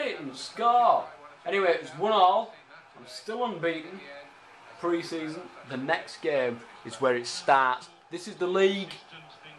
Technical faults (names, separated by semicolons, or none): none